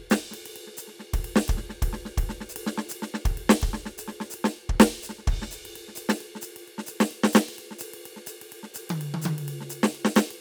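A music recording with no audible technical faults anywhere in the signal.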